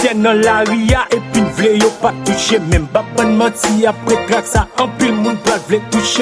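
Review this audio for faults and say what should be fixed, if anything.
No faults turn up in this audio, so nothing needs to be fixed.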